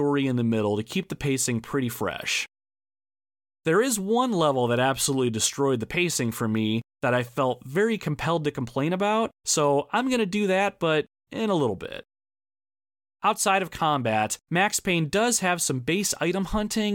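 No technical faults can be heard anywhere in this recording.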